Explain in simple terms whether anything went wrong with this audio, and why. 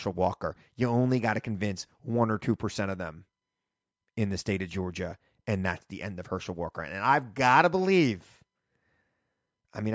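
Nothing went wrong with this speech recording, and there are no faults to point to. It has gone through the usual microphone processing of a call, which trims away the deepest bass and carries nothing above 8 kHz, and that is simply how call audio is meant to sound.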